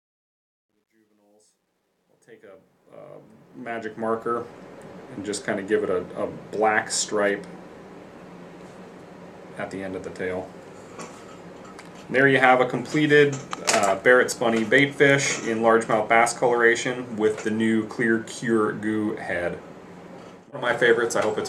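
From 0.0 to 4.51 s, the fade-in that rises from the start shows truncation distortion on a fade. The gain stage discards low bits without dither, consistent with roughly 12-bit resolution. Up to 2.47 s, the quietest part sounds gritty, unlike steady hiss or clean dropouts.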